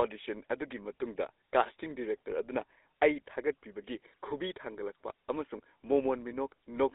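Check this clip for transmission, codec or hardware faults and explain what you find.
One fault runs through the whole clip. Throughout, the speech sounds buzzy and gravelly, confined to roughly 300 Hz to 3.7 kHz. That fits the GSM full-rate codec at around 13 kbps, which models the vocal tract and drives it with sparse, regularly spaced pulses, so fine detail is replaced by a coarse, rasping texture.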